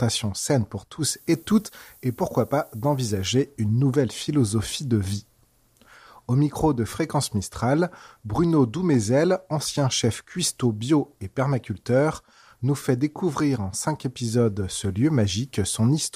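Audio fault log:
1.10–3.28 s, low bit depth with noise shaping: 8-bit rounding error, shifted upward, gives steady thin hiss rising toward the top, about 20 dB below the sound.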